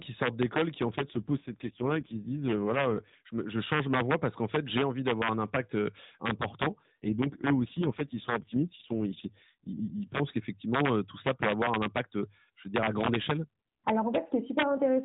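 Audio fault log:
Throughout: integer overflow. The loudest peaks get pushed about 3 dB past full scale, and instead of clipping they wrap around to the opposite sign. Only a tiny fraction of samples are affected, but each one snaps into a harsh crack, much nastier than ordinary clipping.
0.96–3.22 s and 6.82–10.20 s: AMR rate drop. Right after "sortent d'école qui en", and again after "d'avoir un impact important" until "qu'effectivement tout ça peut", the mobile codec sounds like it falls from 12.2 to 4.75 kbps. The band stays the same with no gap, but the speech goes buzzy and synthetic before returning to the light coding heard elsewhere.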